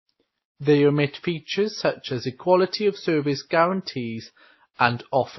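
From start to end, the speech has nothing above 5.8 kHz, so it sounds dull. The different kinds of coding damage are heard together. This is likely transcoding between lossy codecs. The sound fits an MP3 at a low bitrate, recoded to AAC and then to WMA. Each stage spent bits on the damage before it. The lowest cut-off stayed.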